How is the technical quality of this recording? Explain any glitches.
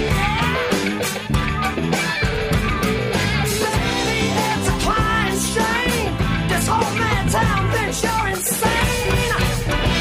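Nothing here sounds off: no glitches stand out anywhere in the recording, so there's nothing to explain.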